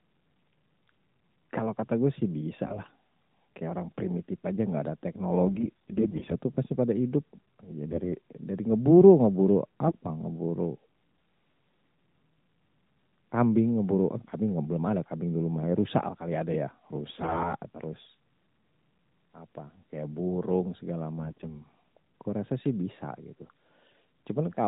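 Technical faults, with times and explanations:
2.65–2.91 s, 5.46–6.33 s, 7.86–8.15 s, 9.86–9.94 s, 17.14–17.53 s, 21.18–21.62 s: AMR bit errors. Corrupted low-protection bits in the 12.2 kbps AMR-NB stream misplace excitation pulses and skew fine pitch, gain and spectral parameters. The speech keeps its rough pitch and level but turns hoarse, scratchy and gargly, harshest near 17.1 s.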